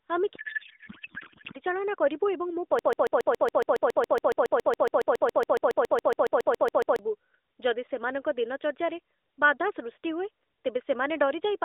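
From 0.36 to 1.59 s the speech is replaced by garbled noise and warble that barely tracks it. This is a codec payload misread. The AMR frames were packed in octet-aligned form but decoded as bandwidth-efficient, so every field is read from the wrong bit position. The decoder still produces output from frames that look valid, but the result no longer follows the speech. The telephone-band sound, confined to roughly 300 Hz to 3.7 kHz with light AMR-NB coloration consistent with 12.2 kbps, returns once the framing lines up again.

Right after "ଏବଂ ମୋ", at 2.79 s, a broken-record loop begins. A 139 ms fragment repeats back to back, identically, 30 times, and runs until 6.99 s. It produces a rapid stutter at about seven repeats per second. The likely cause is a stalled stream or player that kept resending the last fragment it had buffered. Whatever should have played during those four seconds is lost.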